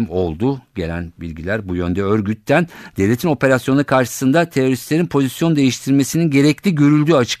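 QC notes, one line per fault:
No faults found in this speech clip.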